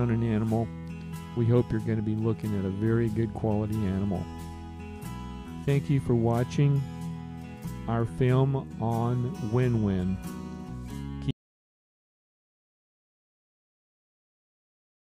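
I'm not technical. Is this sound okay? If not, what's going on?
No. At about 11.31 seconds the audio dropped out to silence and stayed that way to the end of the clip. The likely cause is that the input was lost, perhaps through a disconnected device, a failed link or an accidental mute, while the recording carried on writing silence. You hear the sound cut off mid-flow, then nothing at all, not even background hiss, and whatever happened after that point is gone.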